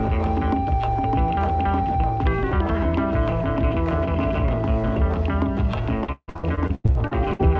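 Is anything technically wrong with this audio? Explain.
Yes. From 6.04 s to 7.41 s there is repeated packet loss (robotic sound): eleven dropouts in quick succession, the longest about 158 ms, with roughly 43% of that stretch filled in by concealment. Each missing packet is patched by extending the preceding audio, and the next loss arrives before the sound recovers, so the passage turns choppy with fragments missing. The audio also carries a wideband call codec, likely G.722, with nothing above 8 kHz.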